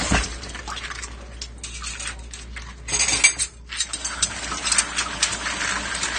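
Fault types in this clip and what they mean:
AAC compression: Everything's dull and smeared. It's likely AAC-LC squeezed hard, and the damage fits something around 32 kbps.
Dropped samples: Three sharp single clicks at 0.71, 2.29 and 5.19 s, likely where a handful of samples vanished and the waveform jumped ahead.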